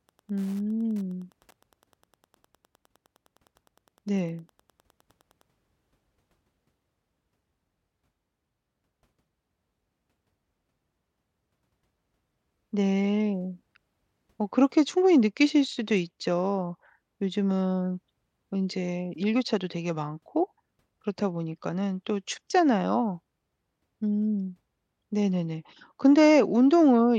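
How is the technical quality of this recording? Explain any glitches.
The recording carries Wi-Fi interference from 0.00 to 5.42 s. A nearby Wi-Fi radio's beacon, repeating every 102.4 ms, is picked up and rectified by the audio circuitry, leaving a faint ticking roughly ten times a second, about 40 dB below the speech.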